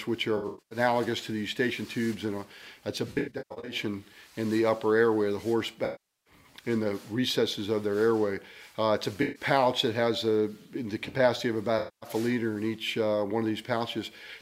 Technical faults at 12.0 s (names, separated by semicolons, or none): AAC frame loss with concealment